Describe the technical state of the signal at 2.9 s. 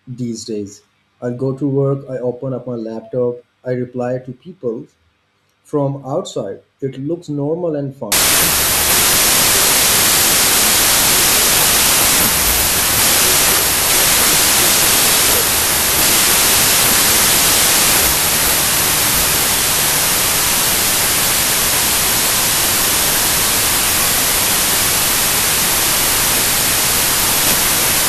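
The signal at 2.9 s is intact, with no audible fault at that moment.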